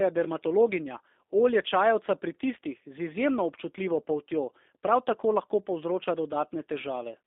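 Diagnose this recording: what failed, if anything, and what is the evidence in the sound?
Codec stage: G.729 codec throughout. The speech sounds rough and synthetic, rebuilt from a coarse vocal-tract model, which fits 8 kbit/s coding. The spectrogram is empty above 3.6 kHz and below 250 Hz.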